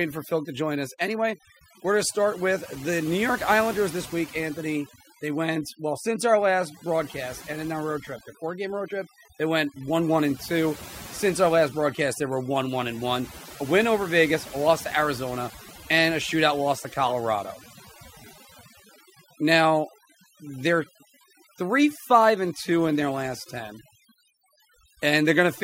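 Speech runs through overdone noise removal from start to finish: a noise reduction stage set far too aggressively has pulled individual frequency bands down or out whenever they sat close to its noise estimate. The gaps between phrases fall to near silence dotted with twinkling specks, and softer speech detail goes with the noise. Unlike a noise gate, which silences everything at once, this thins the sound band by band, even while speech continues.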